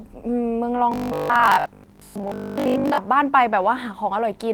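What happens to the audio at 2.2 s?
Robotic sound from repeated short buffers runs from 0.92 to 2.98 s, so 2.2 s falls in the middle of it. The speech becomes a rigid, metallic buzz at 50 Hz that still loosely tracks the syllables. The likely cause is new audio arriving too seldom, so the playback side keeps looping the last stretch, about 20 ms, which fits the 50 Hz buzz, while most of the real signal in that span is skipped.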